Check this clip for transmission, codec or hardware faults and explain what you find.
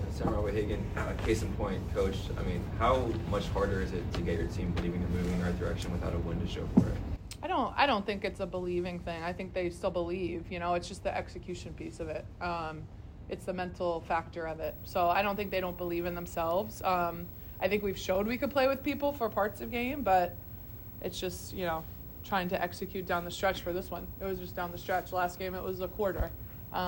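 One hardware fault is present: video or display buzz, from 14.64 s to the end of the clip. A screen or video cable is coupling into the audio path, adding a buzz at the 59.94 Hz field rate with hash above it and a whine at the 15.7 kHz line rate, sitting roughly 15 dB under the main signal. On a spectrogram this appears as a stack of harmonics above 59.94 Hz and a thin constant line near 15.7 kHz. The waveform shows a steady repeating ripple beneath the content.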